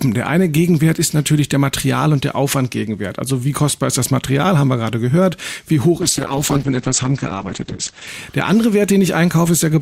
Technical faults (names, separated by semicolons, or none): call bitrate drop